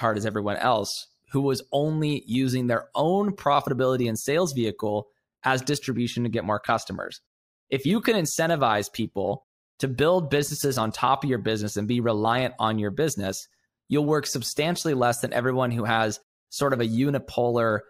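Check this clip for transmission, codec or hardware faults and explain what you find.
One fault is present. From 5.90 to 7.90 s, de-emphasis is applied wrongly. A treble cut meant to reverse pre-emphasis hits speech that either never had any boost or had already been cut once. The top end slopes away, about 8 dB down at 10 kHz. The speech turns dull and muffled.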